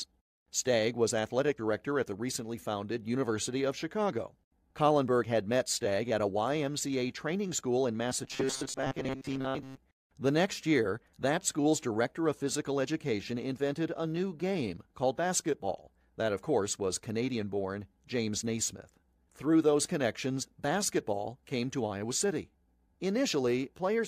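Robotic sound from repeated short buffers, 8.25 to 9.77 s, after "training school in": a 133 Hz metallic buzz, likely from a 7.5 ms fragment repeating over most of the speech.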